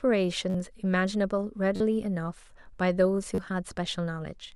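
Brief buzzy stutters sound at 0.50, 1.76 and 3.35 s, each lasting 32 to 43 ms. This is a repeated buffer: new audio arrived late, so one piece of about 11 ms, which fits a 512-sample buffer, replayed with hard joins, dropping roughly 30 to 40 ms of speech.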